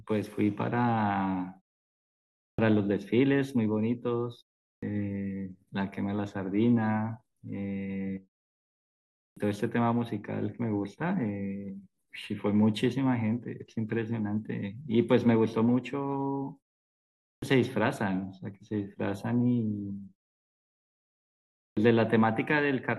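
Speech with a clipped start after a pause, heard five times: at 2.53, 4.76, 9.3, 17.36 and 21.71 s. Each time, roughly 55 to 65 ms of the onset is lost. Words burst abruptly out of silence. The output device sleeps during pauses and wakes too slowly.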